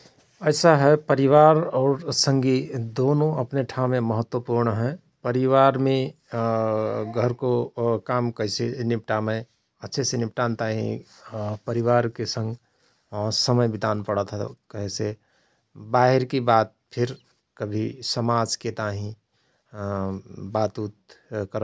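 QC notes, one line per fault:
No fault found; nothing to note.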